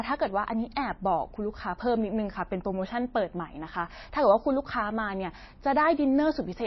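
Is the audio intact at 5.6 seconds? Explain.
No. MP3 compression is likely the cause of damage heard throughout, including at 5.6 s. Nothing is present above 5.8 kHz, and weak frequency detail flickers between frames, giving the speech a watery, swirly edge with smeared attacks, consistent with a starved bitrate near 24 kbps.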